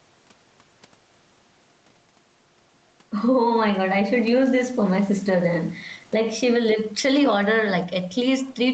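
A speech recording with gain pumping throughout, with the level swinging by around 10 dB. This is likely an input gain set far too high, forcing a fast limiter to clamp down repeatedly and squash the dynamics, heard here through an 8 kHz band-limited call path.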